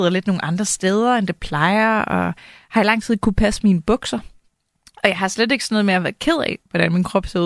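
No technical faults are audible anywhere in this speech recording.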